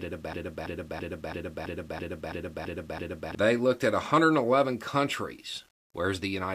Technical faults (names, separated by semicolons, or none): low bit depth without dither; broken-record loop